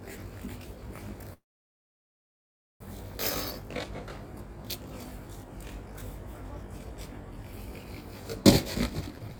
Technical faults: channel delay (comb filtering); call audio freeze; jitter buffer speed-up

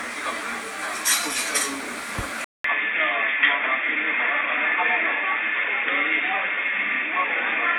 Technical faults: input switched to a poorer device

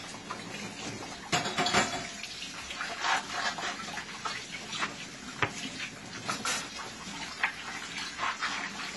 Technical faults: AAC compression

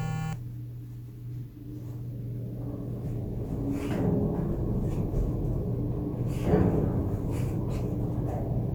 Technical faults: none

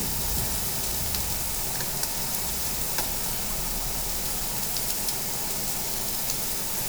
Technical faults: none

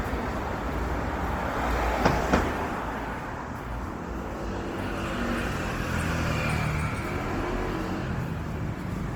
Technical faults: Opus compression

